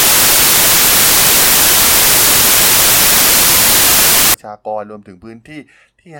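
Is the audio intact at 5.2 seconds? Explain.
Yes, the audio is intact at 5.2 seconds, without any audible dropout, glitch or distortion.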